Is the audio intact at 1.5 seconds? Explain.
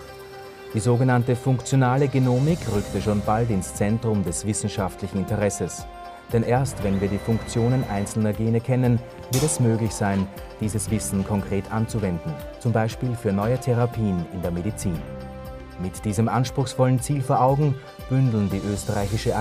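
Yes, at 1.5 seconds the audio is intact, with no dropout, click, distortion or other technical fault at that moment.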